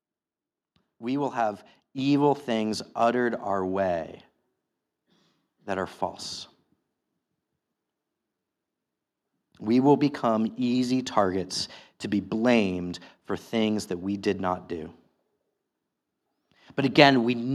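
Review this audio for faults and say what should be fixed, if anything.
At 1.98 s, just after "will have", the microphone volume stepped up by about 6 dB: the call software judged the input too quiet and raised the device level in one jump. Voice and background noise rise together, instantly, which separates it from a speaker leaning closer. Fixing the microphone's input level and disabling automatic gain adjustment in the call software would prevent this.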